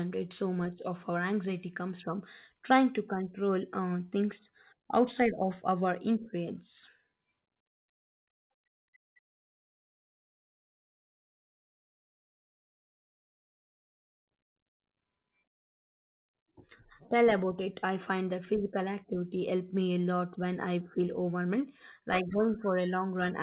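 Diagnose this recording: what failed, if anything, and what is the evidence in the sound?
Nothing in this speech recording stood out as a failure on listening, and its band-limited, telephone-like quality is simply what a G.711 call path carrying nothing above 4 kHz sounds like.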